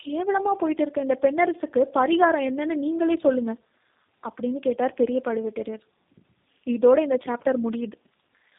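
Throughout this speech recording the sound is rough, muffled and warbly, with nothing audible above about 3.6 kHz. These are the marks of tandem speech coding: the signal was decoded and re-encoded at link borders, and each low-rate coder added its own damage to an already degraded input. The artefacts fit a chain of G.729A at 8 kbit/s, then G.711 A-law, then G.729A again.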